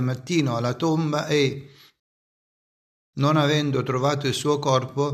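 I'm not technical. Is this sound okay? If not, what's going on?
No. A rebuffering stall from 2.00 to 3.14 s: the player ran out of downloaded audio, went silent for about 1.1 s, then resumed exactly where it stopped.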